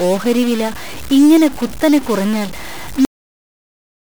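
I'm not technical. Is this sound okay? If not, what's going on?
No. Throughout the speech there is a distorted grit, and even the pauses hiss. That points likely to a stuck bit, one digital bit jammed so about half the samples are wrong. At 3.05 s the speech stops dead mid-sound and drops into total silence. This is a cut-off end, where the final stretch of audio was never recorded or played.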